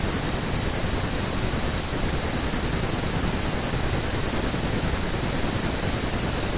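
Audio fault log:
No faults can be heard anywhere in the speech.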